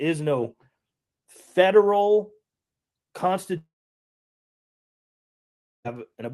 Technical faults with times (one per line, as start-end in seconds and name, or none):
3.57-5.86 long network dropout